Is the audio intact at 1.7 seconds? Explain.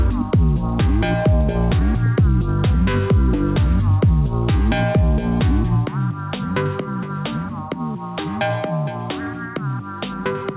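No. At 1.7 seconds, as through the whole clip, there is gain pumping: the gain swings by about 5 dB, flattening the level. The likely cause is gain set far too high, with a fast limiter pulling it down, beneath the call path's 4 kHz band limit.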